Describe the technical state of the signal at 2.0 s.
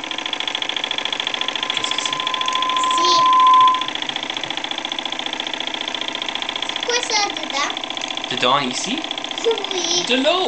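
At 2.0 s the signal is in the middle of a loudspeaker feedback squeal that runs from 1.29 to 4.00 s. A microphone is picking up the loudspeaker it drives, and at 1 kHz the loop gain tops unity, so that tone feeds on itself and swells over about two seconds. By its peak it is roughly 10 dB above the sound. A spectrogram shows a single horizontal line at 1 kHz brightening over time. The waveform's envelope inflates steadily.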